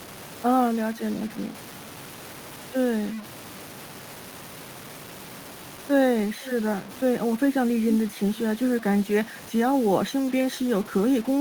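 From start to finish the speech carries a gritty, grainy distortion that moves with the sound, with quiet passages breaking into coarse steps. The likely cause is low bit depth without dither, the signal truncated to something like 5 bits. A waveform shows visible staircase steps, and a spectrogram shows a broadband haze roughly 20 dB below the speech, vanishing in pauses.

Also throughout, a rough hiss rides on the louder and brighter parts of the speech and drops away in silence. This is sample clock jitter: timing errors of several microseconds misplace the samples, and the error is greatest where the waveform slopes steeply. On a spectrogram it appears as high-frequency fuzz that is densest around sibilants and loud onsets.

From 6.41 to 6.51 s, a short scrap of the voice returns 444 ms after the original, about 15 dB down. This is echo leak, likely from a loudspeaker-side echo canceller that let part of the signal through. 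On a spectrogram it shows as a faint, delayed copy of the earlier speech pattern.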